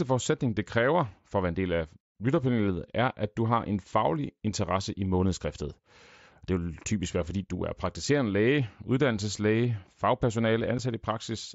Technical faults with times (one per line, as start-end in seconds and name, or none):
10.78 unconcealed Bluetooth headset packet loss